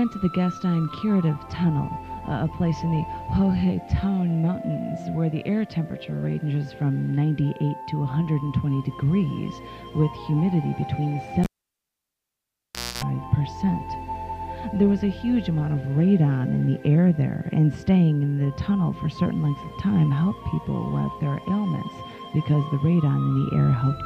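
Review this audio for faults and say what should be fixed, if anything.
At 11.44 s a pop drops the sound to near silence for 1.55 s. Then a 0.27 s burst of 60 Hz mains buzz and a second pop bring it back at 13.04 s. That's a live cable pulled and plugged in, with the tip touching before ground connects. Mute the channel before repatching.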